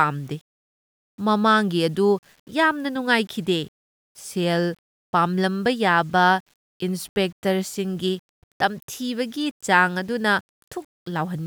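From start to finish the speech carries a grainy, rough edge that shifts with the voice. It gets grittier as the level falls, and the quietest tails break up or drop out instead of fading smoothly. That's low bit depth without dither, likely a reduction to around 9 bits with plain rounding. The error tracks the signal instead of sitting as steady hiss, and it lands roughly 35 dB below the speech.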